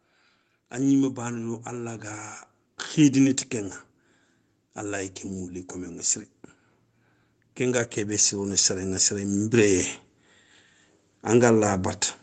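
Speech, with automatic gain rising twice: from 0.71 to 3.81 s it swells about 5 dB, then 7.41 to 9.9 s about 6 dB, voice and background lifting together.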